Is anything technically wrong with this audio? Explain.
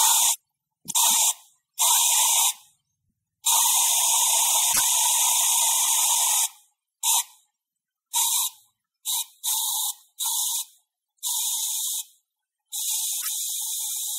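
Yes, there's damaged data in the compressed stream, showing up three times: around 0.30 to 0.38 s, 4.69 to 4.80 s, and 13.18 to 13.29 s. Each is a short blip of roughly a tenth of a second. Bytes in the encoded stream got corrupted there, so the decoder misread those frames, lost sync and hunted for the next valid frame header. That's what gives you the brief glitch cutting into the sound.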